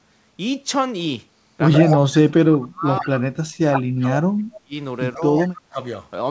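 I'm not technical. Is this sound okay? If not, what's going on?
No. At about 1.78 to 1.97 s, and again more faintly at 5.36 to 5.47 s, a second copy of the voice trails the first by roughly 0.14 s. This is an echo leak, likely from a loudspeaker on the call whose echo cancelling let some of the sound slip back.

The voice also dips or drops out in pieces at 1.96–2.15 s, 2.52–3.36 s, 3.70–4.09 s, 4.26–4.74 s, 5.15–5.30 s and 5.47–5.80 s. This is speech suppressed in double talk, likely because both sides spoke at once and the echo canceller turned this voice down along with the echo.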